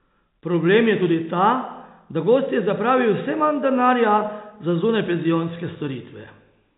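No technical faults can be heard anywhere in the speech. The G.711 telephone coding is working as intended: the sound is confined below 4 kHz, with at most a faint quantisation hiss that tracks the level of the talking.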